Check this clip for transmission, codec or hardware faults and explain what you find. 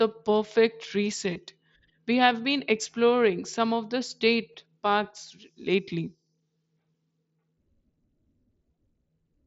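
Two kinds of fault are present in the speech: brief concealed dropouts and a level step partway through.

Concealed Bluetooth headset packet loss at 1.34 s and 4.53 s: about 15 ms went missing each time, which fits two lost frames. The receiver patched each gap with a repeat of recent waveform, leaving a brief buzzy blip.

Sudden gain jump at 5.11 s: speech and background noise drop together by about 4 dB and stay lower to the end. This is likely a gain setting applied instantly, without a ramp.

The mSBC wideband link itself adds light graininess on louder passages.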